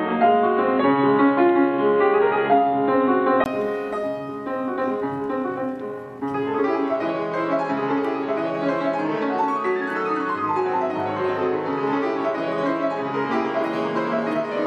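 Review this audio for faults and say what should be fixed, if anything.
The input likely switched to a poorer device from 0.0 to 3.46 s, so the sound is boxy, with a narrower band, a noisier floor, and a brief silence before the level shifts.

The section from 4.68 to 6.36 s was likely time-stretched, compressed to 1.79 times speed with the pitch held, so it sounds rushed.

Lock the recording to one input device and avoid fitting audio to a length by time-stretching.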